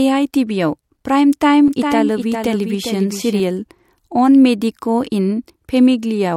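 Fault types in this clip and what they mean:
Doubled audio track: from 1.68 to 3.40 s a second full-band copy of the speech trails roughly 0.4 s behind, around 5 dB quieter, with no decay or room colour, and cuts in and out abruptly, likely from a slower second capture path mixed in.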